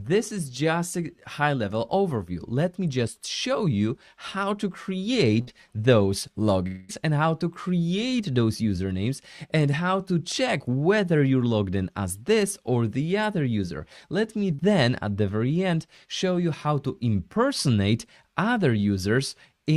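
Around 5.41 s there's a burst of packet loss running to about 5.49 s. Roughly 60 ms of audio never made it, so the receiver kept the last bit of sound going and let it fade across the hole. You hear a brief held buzz or hiss sliding down in level, and then the sound picks up a little further on, with that slice simply gone.

Just after, from 6.67 s to about 6.91 s, the sound hangs on a stretched, fading continuation for nearly the whole 220 ms before the real audio snaps back in at a later point. It never drops all the way to silence. That stretch of fill covers about 216 ms, and the pattern points to a long network dropout as the likely cause. The receiver papered over the gap by extending what it last had.

The last one is a short concealed packet loss at 14.55 s, ending around 14.60 s. About 40 ms went missing, and the decoder patched it by carrying the previous sound forward for roughly 36 ms before easing back into the real signal. 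It comes across as a quick smear or wobble rather than an obvious gap.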